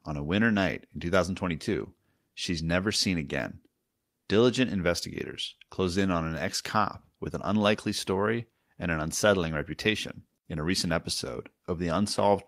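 No technical faults are audible anywhere in the speech.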